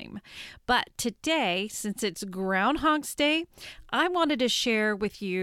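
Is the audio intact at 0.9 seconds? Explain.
Yes, the speech at 0.9 seconds is intact, with no dropout, click, distortion or other technical fault at that moment.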